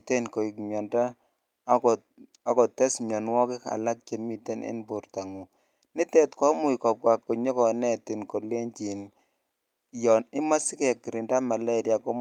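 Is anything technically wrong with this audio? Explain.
No, nothing is technically wrong with this audio.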